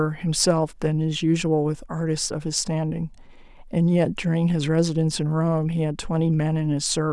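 No technical faults are audible anywhere in the speech.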